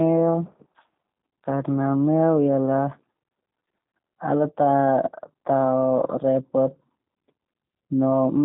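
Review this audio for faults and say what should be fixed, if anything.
G.729 codec damage runs throughout: speech is band-limited to roughly 150 Hz to 3.7 kHz and rebuilt from filter and pulse parameters, sounding rough and synthetic, consistent with 8 kbit/s coding. Prevent it by using a wideband codec such as Opus at a higher bitrate.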